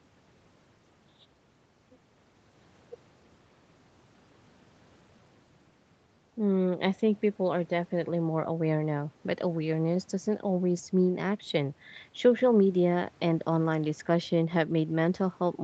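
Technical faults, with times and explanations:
No technical faults in this speech.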